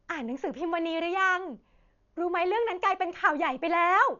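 Dull, band-limited speech runs the whole length of the recording, with nothing above about 7 kHz and a rough, fluttering noise clinging to the voiced tones. The damage is heavy and points to Dolby Digital compression as the likely cause, at a rate that fits roughly 48 kbps. At that rate the encoder narrows the band and leaves many frequency lines without mantissa bits. The decoder fills those lines with dither noise, producing the flutter.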